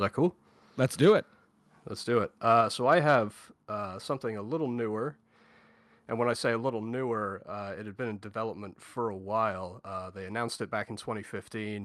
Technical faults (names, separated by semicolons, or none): microphone overload; microphone volume stepped down